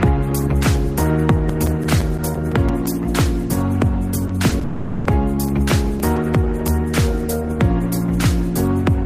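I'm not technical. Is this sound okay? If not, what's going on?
No. Three kinds of problems can be heard.

CD scratch ticks: a scratch on the disc destroys data the player can't rebuild, once per turn, so it patches over the damage. You hear a regular run of eleven tiny clicks from 1.15 to 2.86 s, none longer than about a hundredth of a second, and eight more between 5.49 and 6.68 s.

Short concealed packet loss: small pieces of the transmission arrived too late, so the receiver stretched the previous sound across each gap. This gives brief 20 ms smears or wobbles at 4.27, 4.49 and 4.59 s.

Long network dropout: from 4.63 to 5.07 s, for about 0.42 s, the real sound is replaced by a continued buzz or hiss of what came before. It fades without falling to silence, and then the sound resumes with that part missing. The likely cause is a longer interruption in the network connection.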